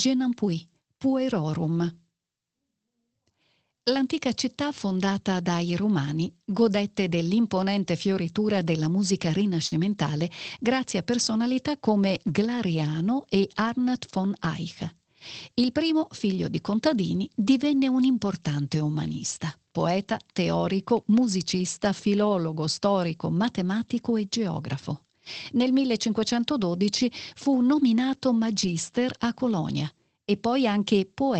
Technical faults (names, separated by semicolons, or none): lost packet rebuilt from error correction; short concealed packet loss